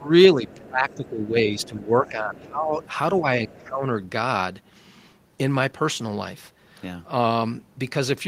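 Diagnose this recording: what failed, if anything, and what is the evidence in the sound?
The call processing stage most likely failed in its handling of double talk. Its echo canceller could not tell the near talker from loudspeaker echo and pulled the whole microphone signal down. The result is speech suppressed in double talk: the talker's speech sinks, by about 15 dB at its deepest, from 0.0 to 2.79 s and again from 3.21 to 3.88 s. That is roughly two and a half seconds of damaged speech.

The same echo canceller also let residue through. The talker's device plays the far end on a loudspeaker, and the canceller failed to subtract all of that from the microphone, most likely through a misconverged or lagging echo path estimate. The other side's voice leaks through, faint at about 25 dB below the talker, at 0.47–1.09 s, 1.61–1.84 s, 2.41–2.48 s and 2.81–3.2 s.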